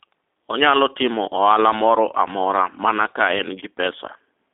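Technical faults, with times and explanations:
Throughout, G.729 codec: the speech sits in a narrow 250 Hz to 3.7 kHz line band and is rebuilt from a vocal tract model and a handful of pulses per frame, so it sounds plainly rough and synthetic, which fits an 8 kbit/s VoIP link.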